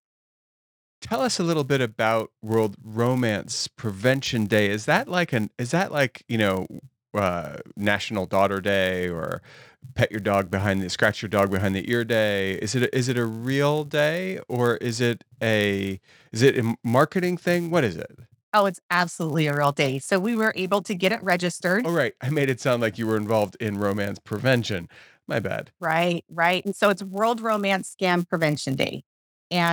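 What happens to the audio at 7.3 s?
Filter restarted on every block, audible at 7.3 s and throughout the speech: each block, consistent with 256 samples, starts from silence, adding a level-following buzz at 172 Hz.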